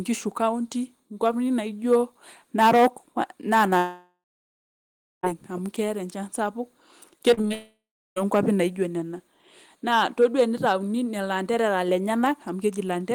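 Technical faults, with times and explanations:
3.77–5.25 s and 7.54–8.18 s, long network dropout: the audio stops for about 1.46 s and then about 0.62 s. Each time the last sound carries on as a fading buzz before giving way to silence, roughly 1 s of it in the first gap and 0.33 s in the second. The sound then resumes further along with the middle gone. This is likely a stall in the incoming stream, with the receiver extending the final fragment until it gave up.
7.31–7.52 s, repeated packet loss (robotic sound): five short holes, the longest 30 ms, remove about 100 ms of audio within this fifth of a second. Each hole is bridged by repeating the preceding fragment, so about a third of the span is patched material. The rapid alternation of real and repeated pieces makes the sound choppy. It leads straight into the second dropout at 7.54 s.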